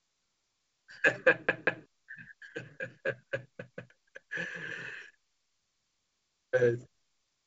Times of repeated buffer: 1.49-1.86, 3.72-3.90

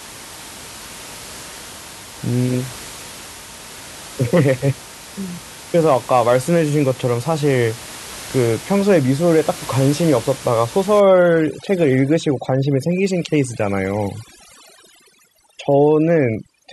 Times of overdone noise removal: 11.00-16.73

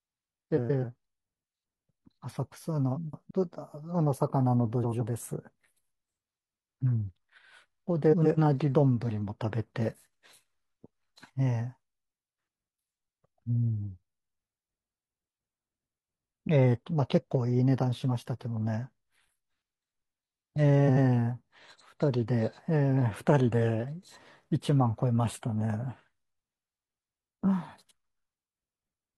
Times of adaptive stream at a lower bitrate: none

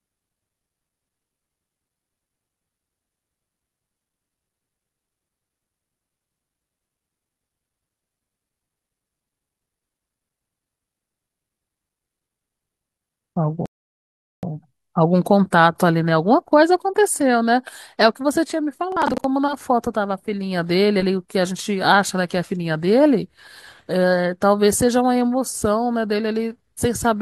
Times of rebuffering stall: 13.66-14.43

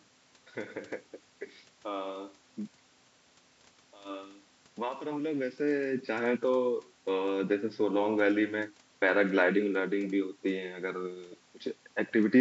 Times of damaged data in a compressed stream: none

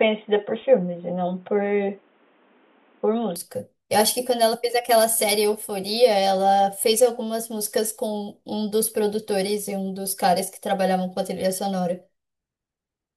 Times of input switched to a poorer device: 0.00-3.36

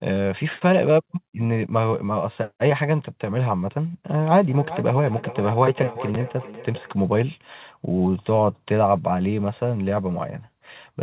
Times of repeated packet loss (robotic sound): none

